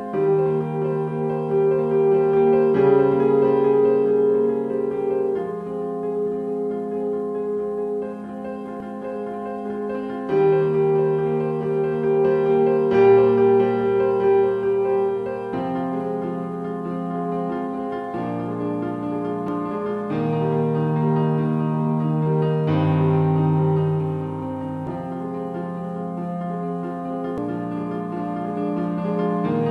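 At 8.80, 19.48, 24.87 and 27.38 seconds the audio jumps forward: compressed frames skipped. Whole frames never reached the output, either missing or rejected by the decoder as damaged, so the sound lurches ahead by roughly 0.3, 0.7, 0.4 and 0.7 seconds, in steps that fit frames of about 93 ms.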